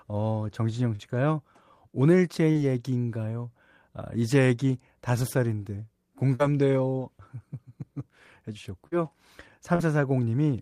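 Short concealed packet loss hits five times, at 0.95, 2.51, 6.35, 8.87 and 9.75 s. Each time about 40 ms of speech arrives too late and gets patched by extending the previous sound, leaving a quick smear or wobble.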